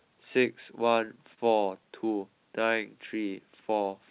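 A short stall from a late packet at 1.34 to 1.39 s: the jitter buffer ran dry, so about 37 ms of sound is held and stretched before the speech resumes unbroken. The narrowband band limit at 4 kHz fits a G.711 call path.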